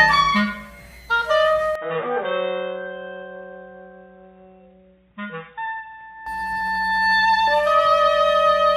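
At 1.75 s the sound abruptly turns dull and boxy and drops to noticeably lower level, roughly 10 dB down, with faint new background noise sitting well beneath it. Nothing is heard above 3.8 kHz until 6.26 s, when the full bandwidth and level return just as abruptly, with no gap at either change. This is likely an input switched to a poorer device, whose narrower band, own tone and own noise replace the original microphone for that stretch.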